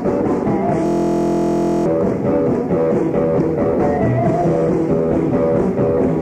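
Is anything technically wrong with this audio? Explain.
Yes. A system hang loop runs from 0.86 to 1.86 s. The system froze while the hardware kept replaying one 23.2 ms buffer, which fits a 1024-sample buffer. That loop repeats at 43.1 Hz, so it sounds like a steady buzz. About a second of audio is lost.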